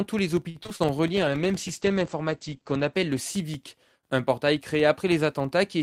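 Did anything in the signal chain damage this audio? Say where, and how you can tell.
Yes. A filter restarted on every block ticks throughout at about 21.5 Hz, which fits a 2048-sample buffer whose filter state resets each block.

Repeated packet loss (robotic sound) from 0.49 to 0.82 s: four network gaps, the longest 54 ms, patched by extending prior sound, giving choppy texture.

A call bitrate drop from 1.15 to 4.19 s sounds rough and muffled: the codec falls from 40 to 11 kbps and bandwidth narrows from 20 kHz to 8 kHz.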